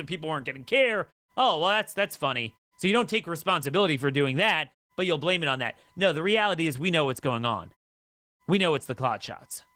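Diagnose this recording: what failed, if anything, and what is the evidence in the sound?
The codec stage failed: the speech went through Opus voice compression at a bitrate low enough to damage it audibly throughout. The sound points to hybrid mode, with the linear-prediction layer coding the band below 8 kHz and a thin transform layer above. The excitation is coarsely quantised in 20 ms frames, which fits about 16 kbps. The voice comes out muffled, hoarse and slightly robotic, while the pauses fall cleanly silent as the muting intends.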